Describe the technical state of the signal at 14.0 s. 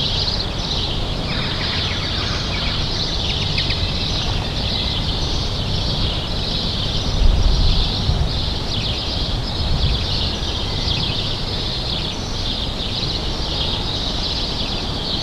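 At 14.0 s the everyday sound carries a doubled audio track, present throughout the clip: a second full-band copy about as loud as the original trails it by roughly a tenth of a second, with no decay or room colour, likely from a slower second capture path or misaligned edit.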